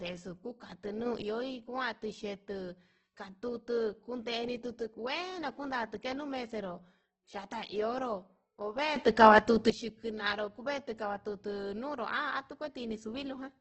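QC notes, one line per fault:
throughout: Opus compression. The sound is heavily grainy and rough rather than swirly, with band energy kept and gaps filled by folded or noise-like content, not MP3-style holes. Nothing sounds above 18.7 kHz. The damage fits a very low rate near 12 kbps in CELT mode, likely Opus.
1.06–1.22 s and 8.96–9.70 s: sudden gain jump. The level steps up by about 6 dB and then by about 12 dB, instantly and without a ramp, and the background noise rises with the sound. Unlike a fade or compressor pumping, there is no gradual change, likely from an unramped gain setting.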